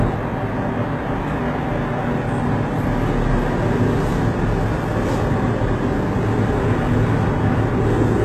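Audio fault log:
Throughout, HE-AAC compression: the treble stops dead at about 12.3 kHz and has a synthetic, misaligned brightness with plainly audible coding damage. This is likely spectral band replication at a very low rate, near 16 kbps, where upper bands are copied from lower ones rather than coded.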